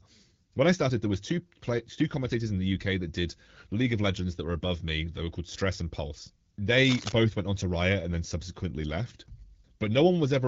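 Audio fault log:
6.85 to 7.12 s, cable scratch noise: a dense, uneven burst of scratching sits over the speech, nearly as loud as it, just before "went on to". It is likely a worn cable or connector being moved, with contact resistance jumping rapidly.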